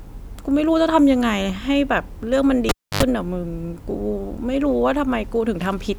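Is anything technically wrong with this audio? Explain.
Yes. From 2.69 to 3.03 s a live cable is pulled and plugged in: a pop, about 290 ms of near silence, an 85 ms burst of 50 Hz mains buzz as the tip connects, and a second pop as the sound returns. The buzz and paired pops set it apart from a plain dropout.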